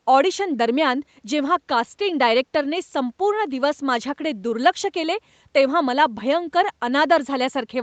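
Nothing is technically wrong with this speech clip; its content stops at 8 kHz, as expected from the call path it went through.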